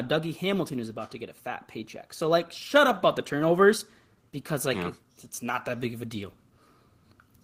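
At about 2.88 s, between "like shut" and "up about the turnovers", the microphone volume steps up. Something in the capture chain decided the mic was running too quiet and bumped the input gain by about 4 dB in a single jump instead of easing it in. Because it's applied before anything else, the voice and the room noise behind it get louder together, right mid-phrase, so you hear a sudden lift rather than the talker leaning in.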